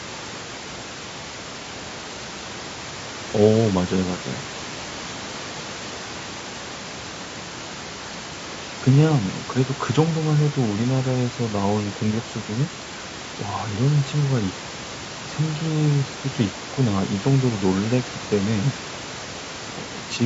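Throughout the speech, the signal has most likely passed through low-delay AAC compression of the AAC-ELD kind, at a rate consistent with about 32 kbps. Its short frames resolve pitch harmonics poorly, so the voice sounds plainly rough and grainy, with noise filling the gaps between harmonics and a thin, synthetic-sounding top band, above room noise sitting about 16 dB below the speech.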